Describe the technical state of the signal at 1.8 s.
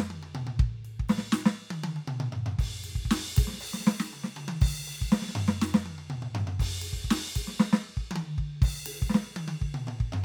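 At 1.8 s the music plays through intact, with no dropout, distortion or other fault at that moment.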